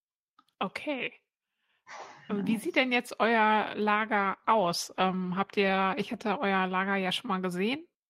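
Right after "sieht denn jetzt euer", 4.14 to 7.37 s, a call bitrate drop from 32 to 14 kbps makes the encoder code coarsely, so the speech turns rough and muffled.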